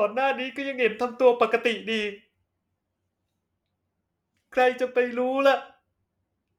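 Nothing stood out on listening to this speech recording.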